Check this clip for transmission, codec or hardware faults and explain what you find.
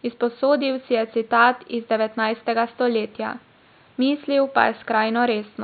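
No transmission, codec, or hardware faults.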